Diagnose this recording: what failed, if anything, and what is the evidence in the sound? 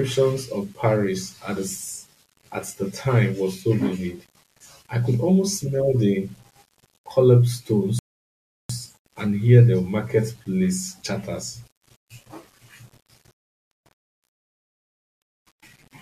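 Grainy, signal-following distortion runs the whole way through the speech. Quiet passages sound gritty and the softest tails break up rather than fading cleanly, with the error sitting around 35 dB below the level of the speech. That points to the sample-format conversion stage, likely low bit depth without dither. It sounds like a word length of about 9 bits with plain rounding. With no dither to decorrelate it, the quantisation error tracks the waveform and comes across as distortion rather than steady hiss.

There's also a rebuffering stall at the playback end. At 7.99 s the audio drops to dead silence, and at 8.69 s it picks up exactly where it left off, going straight into "and hear the marketplace" with nothing skipped. That adds about 0.7 s to the running time. The player ran dry on downloaded data and simply waited for more before carrying on, so no content was lost.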